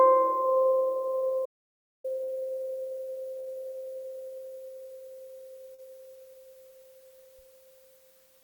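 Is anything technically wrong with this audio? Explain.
Yes. From 1.46 to 2.04 s the music cuts to dead silence for about 0.59 s, with no room tone at all: an audio dropout to silence, likely from a lost input while the recorder kept writing silence. Brief smears or wobbles follow at 2.23, 3.39 and 5.74 s. These are short concealed packet loss, where about 40 ms of audio never arrived each time and the receiver extended the preceding sound to bridge each gap.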